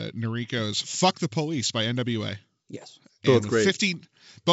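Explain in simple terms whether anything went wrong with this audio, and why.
Nothing went wrong with this audio: it is speech carried over wideband telephone coding, which keeps sound only up to about 7.7 kHz, and that is how the coding is meant to work.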